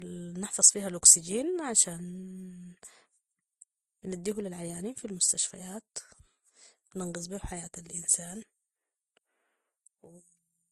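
Throughout, the speech stops at 12.1 kHz and carries two layers of smearing rather than one, likely transcoding between lossy codecs, Vorbis then Opus.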